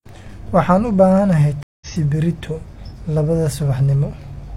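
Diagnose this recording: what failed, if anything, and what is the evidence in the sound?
A stream reconnect at the network stage: the speech cuts to silence at 1.63 s for 184 ms and resumes at 1.88 s roughly 150 ms further on, skipping material. The connection dropped, and the player reconnected and restarted its decoder mid-stream.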